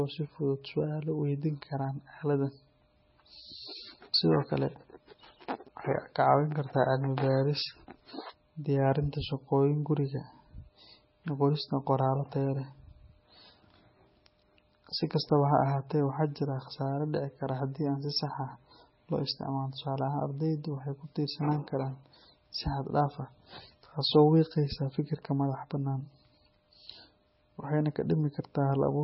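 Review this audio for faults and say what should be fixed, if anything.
Throughout, the speech sounds swirly and watery with nothing above 5.6 kHz, likely heavy MP3 compression at a bitrate around 18 kbps that zeroes weak lines. Re-encode from the original at a much higher bitrate.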